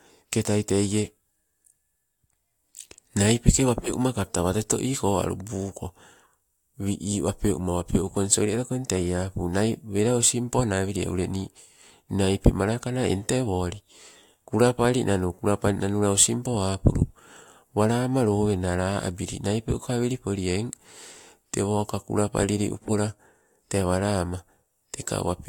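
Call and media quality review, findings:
No audible faults found in this speech recording.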